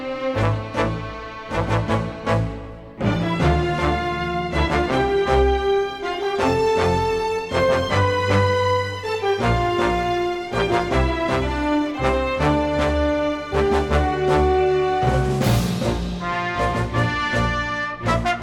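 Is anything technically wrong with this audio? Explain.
No, nothing technically wrong turns up anywhere in this recording.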